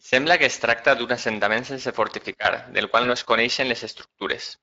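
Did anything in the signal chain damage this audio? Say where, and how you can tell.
Yes. The network stage damaged it: VoIP packet loss concealed by the speech codec, from 3.03 to 3.09 s, right after "assentament sense fortificar del" and before "no es". The gap fits a single lost 20 ms frame. The Speex decoder, otherwise carrying light codec colouring, filled it by repeating its last pitch and filter at falling gain, so the speech briefly smears into a fading buzzy tone or coloured noise. Because each frame builds on the one before, the weakness lingers past the 20 ms loss. On a spectrogram, the harmonics run flat and evenly spaced across the gap, then thin out. The waveform shows a repeated, decaying cycle instead of the normal speech shape.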